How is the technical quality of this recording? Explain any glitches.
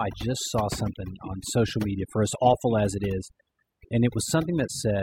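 The recording suffers from overdone noise removal throughout the speech. An aggressive noise reducer cuts frequency bands near its noise estimate, leaving a lowered background with twinkling specks.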